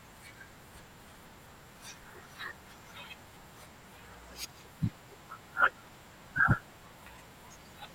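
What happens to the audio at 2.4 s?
Nothing goes wrong at 2.4 s; the speech there plays through intact, with no dropout, click, or distortion.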